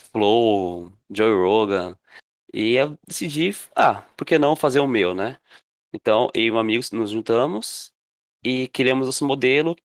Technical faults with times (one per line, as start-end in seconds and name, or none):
none